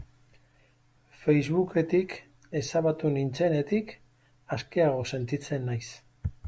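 No technical faults are audible.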